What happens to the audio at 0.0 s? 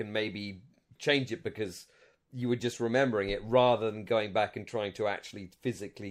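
Nothing goes wrong at 0.0 s; the speech starts cleanly, with no dropout, click or distortion at that moment.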